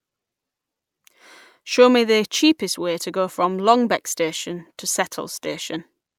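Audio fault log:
No faults heard anywhere in this speech recording.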